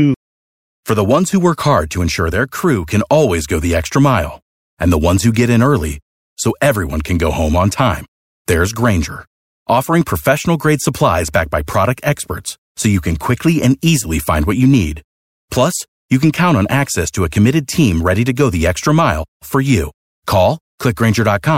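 A speech recording with no audible technical faults at any point in the signal.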